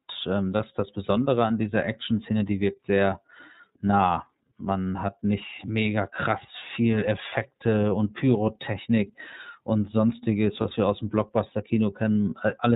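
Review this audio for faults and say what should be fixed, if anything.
The whole speech recording has been passed through the iLBC codec. Nothing above 4 kHz survives, and the voice has a plainly audible rough, slightly synthetic grain. That fits the 13.33 kbps mode with 30 ms frames, each frame's excitation coded on its own. Unlike a simple low-pass filter, which only dulls the top end, this codec also roughens the voice itself. Sending the audio over a wideband codec or a higher-quality path would prevent it.

There are lost iLBC frames at 0.56 s, just before "ist das", and at 10.61 s, between "und sonstiges" and "wir aus dem". Each gap is 30 ms long, which points to a single lost frame. The decoder fills it by repeating the last pitch cycle mixed with noise, so each gap sounds like a brief held, buzzy vowel. A dropout to silence or a click would sound different. The voice recovers immediately because iLBC frames stand alone. 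Forward error correction or packet redundancy on the network link would prevent these gaps.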